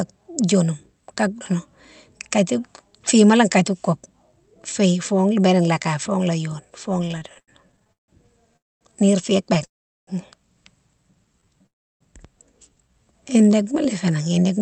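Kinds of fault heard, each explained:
Repeated stalls (stutter): Packets kept arriving late or slower than playback, so the jitter buffer ran dry again and again, and each time the receiver stretched out the last sound to fill the wait. Just after "fo la yone fo", from 7.05 to 9.63 s, the audio catches 17 times, the longest hold 157 ms, about 390 ms filled in all, roughly 15% of that stretch. Nothing is lost, but the flow drags and stutters.
Call audio freeze: The likely cause is packets being held up in transit, emptying the jitter buffer so that playback stops and then resumes exactly where it paused, adding delay rather than dropping audio. The sound halts at 8.57–8.83 s (242 ms, about 230 ms of it silent), at 9.65–10.09 s (426 ms, about 390 ms silent), and at 11.67–12.03 s (340 ms, entirely silent). Then it picks up again.
Jitter buffer slow-down: With the buffer running low or its target delay just raised, the receiver rebuilt its reserve by repeating single pitch periods and bits of pauses many times in a row. 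Between 11.32 and 13.85 s this adds 211 ms, so the audio plays at about 92% speed with the pitch unchanged. Sounds come out slightly drawn out, all within the band-limited, 8 kHz-wide sound of the Opus call path.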